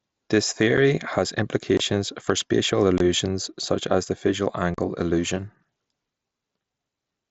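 Short, hard-edged holes punch through the speech at 0.77 s, from 1.77 to 1.80 s, from 2.98 to 3.01 s and from 4.74 to 4.79 s, each cut off abruptly. This is unconcealed Bluetooth headset packet loss. Voice packets between headset and phone went missing over the wideband mSBC link, and silence or an idle pattern filled the gaps rather than any patched-over sound. The gaps run about 7.5, 22.5, 22.5 and 37.5 ms, which fits one, three, three and five lost frames.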